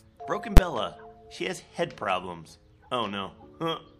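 At 0.57 s there's a single loud bang, and it's a case of invalid numbers at full scale. Somewhere in the processing a calculation blew up into infinite or undefined values, and those got pinned to the largest positive or negative value, so the output sits flat at one extreme, far beyond the audio's peaks, for about 12 ms. That span fits one 512-sample processing block. Because the block is so short, the jump up and the drop back merge into one sharp crack.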